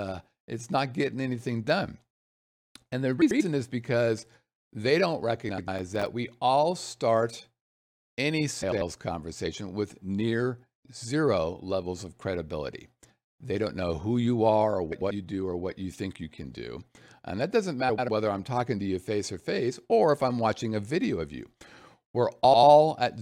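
Right at 3.22 s there's a short garbled flutter lasting about 0.2 s, just before "is because they don't". It's frames out of order: two neighbouring chunks of roughly 93 ms each (which fits blocks of four codec frames) got decoded in swapped order. You hear the halves exchanged. The same thing comes back at 5.49 s, right after "is because they don't", and again at 8.62 s, 14.92 s, 17.89 s (between "that doesn't" and "I'm talking to you") and 22.44 s, each lasting about 0.2 s. None of them loses any time.

Between those, from 5.79 to 6.06 s, there's a burst of gritty crackle. That's processor overload crackle: the processor missed a run of deadlines on very short buffers, a few milliseconds each. Each miss dropped in a tiny hard-edged gap of silence, so you get a handful of clicks tearing across the sound for about a quarter second. Then the load eases and it stops.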